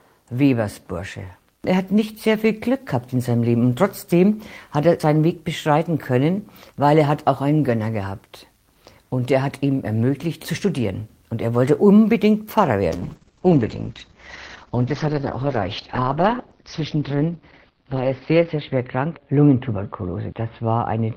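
From 12.9 s to the end of the clip, the audio turns rough and watery and loses its top end, with everything above about 6 kHz gone where the band had reached 20 kHz. This is a call bitrate drop. The connection's bandwidth estimate fell, and the Opus encoder was forced to spend far fewer bits, which fits a fall from around 32 kbps to roughly 8 kbps. It codes each frame more coarsely and narrows the band. The lowest rate holds for 5.6 s, and the sound never recovers.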